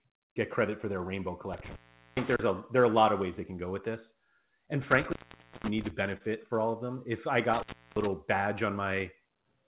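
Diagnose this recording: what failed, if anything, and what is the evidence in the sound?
Intermittent contact in the analogue wiring: dropouts at 1.53–2.39 s, 4.82–5.90 s and 7.53–8.06 s, open about 0.41, 0.51 and 0.34 s, show as crackle-edged near-flat waveform gaps.

Short concealed packet loss on the network leg: at 6.17–6.23 s, 30 ms was synthesised from preceding sound, a brief smear visible as smoothed spectrogram texture below the 4 kHz G.711 ceiling.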